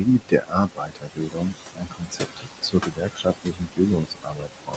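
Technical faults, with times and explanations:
Throughout: noise suppressor artifacts. The suppressor pulls down bands it judges to be steady noise by about 20 dB, frame by frame, so the background sinks in the gaps and swells under the speech.
0.00–1.56 s, 1.73–3.80 s, 3.96–4.76 s: speech cut by the noise suppressor. In all three stretches the suppressor mistook parts of the speech for noise and lowered them by up to about 21–22 dB, so those parts sound swallowed or faint. Roughly a second is affected in the first stretch and about one and a half seconds in the second.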